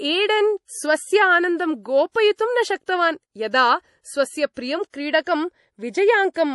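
From start to finish there's nothing above about 11.5 kHz and a watery swirl, likely MP3 compression at a low bitrate near 48 kbps. Pre-echo hits at 2.12, 2.36, 2.86, 4.54 and 4.90 s: a 25–38 ms hiss smeared ahead of each sharp onset.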